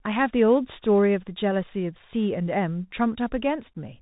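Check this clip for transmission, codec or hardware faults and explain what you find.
The clip has one fault, present from start to finish: the Bluetooth CVSD headset codec.

Throughout the speech, the sound is narrowband. Nothing above 3.8 kHz survives. CVSD sends one bit per sample, just up or down, and adapts its step size. The damage fits a 64 kbps CVSD link. When loud high-frequency sounds outpace the step, they distort. S sounds come through scratchy. A granular hiss sits under the speech. The damage is plainly audible.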